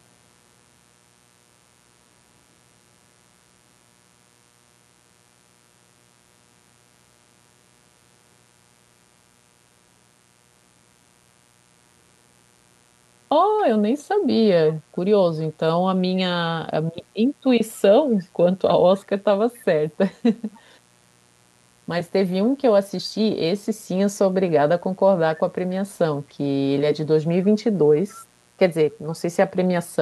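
It's a speech recording with a steady, raspy mains buzz running the whole way through, faint and sitting roughly 40 dB under the speech. It's built on 60 Hz, with sharp harmonics climbing well up into the kHz range. That spiky character points to something like a dimmer, a rectifier or a missing shield letting switching pulses in twice per mains cycle. Then from 19.54 to 19.59 s there's a brief echo leak, a very faint scrap of speech arriving 273 ms late. The likely culprit is a far-end loudspeaker whose echo canceller didn't fully scrub what its mic picked up, so a bit got sent back.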